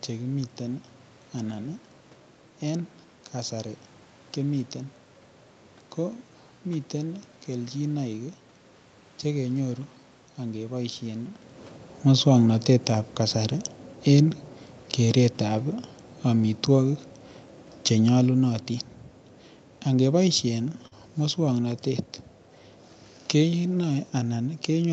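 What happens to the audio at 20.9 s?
A short concealed packet loss runs from 20.87 to 20.94 s. About 40 ms of audio arrived too late, so the receiver extended the preceding sound and then blended back. It is heard as a brief smear or wobble. A spectrogram shows a flat, repeated patch with soft seams.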